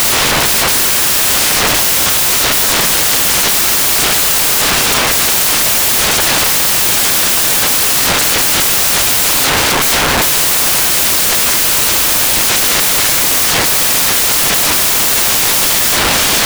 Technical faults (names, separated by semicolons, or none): samples built from the wrong bytes